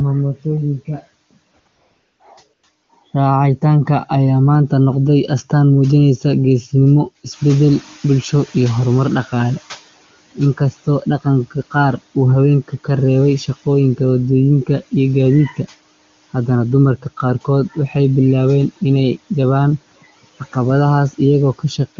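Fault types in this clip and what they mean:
AMR comfort noise: At 1.51 to 1.53 s, 1.59 to 1.65 s, 1.67 to 2.19 s, 2.53 to 2.63 s and 2.83 to 2.89 s, the phone treated the talker as silent and stopped sending speech frames. The receiving end filled each gap with synthetic noise built from a rough description of the background's level and spectral shape. The real background gives way to a smooth, even hiss that cuts in and out, longest across the half-second stretch from 1.67 s.
Noise suppressor catching up: From 7.31 to 9.82 s, the room noise jumps by about 10 dB at around 7.5 s. The suppressor's running estimate of the noise floor trails behind the change, so the louder background first comes through with little reduction. Over roughly 2.5 s the estimate adapts, and the noise sinks by about 12 dB. The result is an audible swell of background that then fades back down.
Speech cut by the noise suppressor: At 10.57 to 11.07 s and 17.74 to 17.95 s, the suppressor mistook parts of the speech for noise and pulled them down along with the background, by as much as about 14 dB. 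In the first window about 0.15 s is affected, and in the second about a tenth. Soft consonants or word endings there sound swallowed or suddenly faint rather than cleanly finished.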